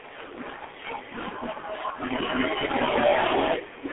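From start to finish the speech has gone through a G.723.1 codec, a 6 kbit/s-sounding telephone squeeze: nothing above 3.8 kHz, so it's muffled, hoarse, with smeared consonants.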